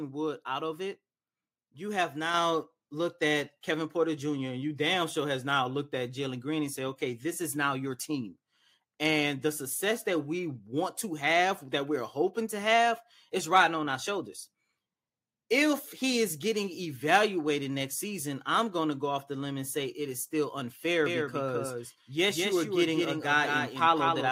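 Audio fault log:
2.34 s, microphone volume stepped up. The level jumps by about 4 dB in a single step and stays there. Voice and background rise together, which points to the input gain being raised at the device rather than the speaker getting louder.
21.06 s to end, doubled audio track. A second full-band copy of the speech enters abruptly, trailing by roughly 200 ms and a few decibels quieter. It has no decay or room colour, so it is likely a second, slower capture path mixed in.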